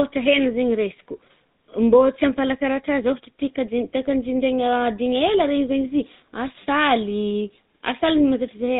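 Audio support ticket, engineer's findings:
Speech path encoded through GSM full-rate codec, entire clip. Consistent with a 13 kbps full-rate link. Vocal tract modelled, excitation rebuilt from regular pulses at one-third sample density. Result: plainly audible buzzy, gravelly roughness on the voice, nothing above 4 kHz, dull band-limited top end. Check network leg or gateway transcoding to GSM.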